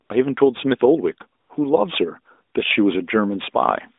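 At 0.06 s, for 40 ms, the real background drops out and a smooth, steady noise takes its place. The same thing happens again at 1.40 s, for 100 ms. This is AMR comfort noise. The phone judged the talker silent and stopped sending speech frames. The receiver then filled the gap with synthetic noise built from a rough sketch of the background's level and spectrum. So the room sound switches out briefly and a flat, artificial hush fills the pause.

From 2.65 s to the end, a constant, even hiss sits under the speech. This is low bit depth with dither. The signal is stored with too few levels, which fits a 10-bit signal. Dither was added before rounding, so the rounding error becomes plain white noise instead of distortion. The hiss sits about 45 dB below the signal. It does not change with the speech. The narrowband AMR line carries all of this, so the band stays between roughly 250 Hz and 3.7 kHz throughout.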